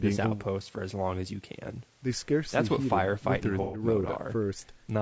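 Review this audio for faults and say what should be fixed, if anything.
Throughout the speech, the sound is rough and grainy, with noise between harmonics. This is likely low-delay AAC compression, whose short frames starve at around 32 kbps. Raising the bitrate would prevent it.

From 3.62 to 3.82 s, a smeared, noisy patch marks AAC frame loss with concealment: the decoder rebuilt roughly 120 ms from the last good spectrum. Forward error correction or a larger jitter buffer would prevent this.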